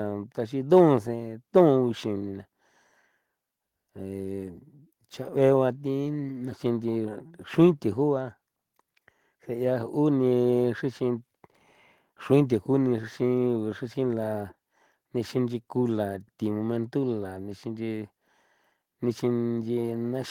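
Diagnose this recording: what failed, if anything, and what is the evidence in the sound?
Nothing in this speech recording points to a failure at any stage of the chain. Close listening turns up no event that calls for a diagnosis.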